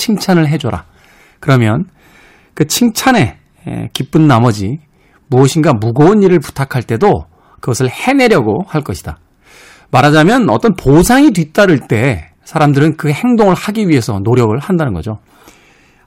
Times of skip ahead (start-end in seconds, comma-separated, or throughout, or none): none